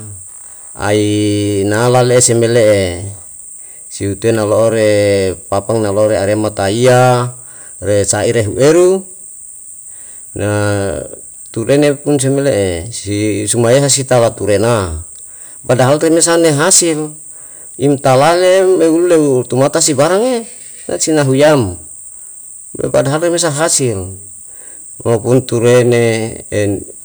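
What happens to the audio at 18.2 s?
At 18.2 s the speech has a harsh, gritty fuzz on its louder syllables, and the same hard clipping runs through the whole clip rather than starting at that point. The signal is driven about 12 dB past what the stage can pass, so the peaks are sliced flat. Only a small share of samples, around 2 percent, hit that ceiling, but each flattened top adds high harmonics that rasp across the loud parts.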